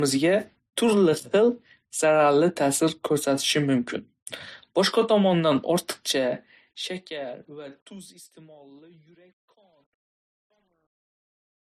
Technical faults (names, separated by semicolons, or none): transcoding between lossy codecs